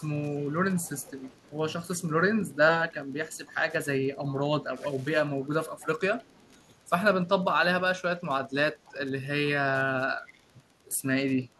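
Wi-Fi interference runs through the whole speech clip. A nearby radio's beacon is being rectified by the audio circuit. It produces a steady tick every 102.4 ms, about ten a second. The ticking sits low, roughly 35 dB under the speech.

An echo leak appears at 0.0–1.51, 2.54–3.56, 4.23–4.86, 5.43–6.58, 8.18–8.23, 8.85–8.92 and 10.27–10.4 s. A faint copy of the speech returns 319 ms late. Its level varies from roughly 40 dB to 20 dB below the speech. The likely cause is a far-end echo canceller letting loudspeaker pickup through.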